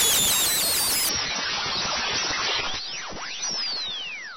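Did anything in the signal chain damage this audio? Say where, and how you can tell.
Yes, at the codec stage, where an adaptive stream switched to a lower bitrate. At 1.09 s the treble collapses abruptly, with nothing above 6 kHz, and swirly, synthetic-sounding codec artefacts rise until the end at 4.36 s. That points to a switch from a clean AAC rendition near 96 kbit/s to one near 16 kbit/s. Packet loss or a buffer underrun would leave a gap or glitch. Here there is none, only a sudden, sustained drop in quality.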